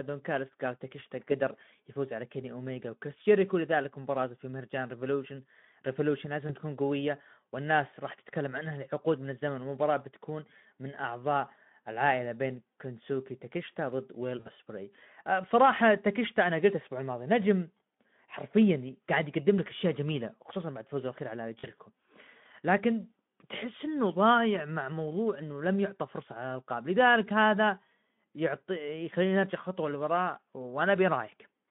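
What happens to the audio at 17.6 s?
Nothing goes wrong at 17.6 s: the speech continues intact through that moment, still carrying only the light coloration of the 15 kbps Speex path and its narrow 150 Hz to 3.5 kHz band.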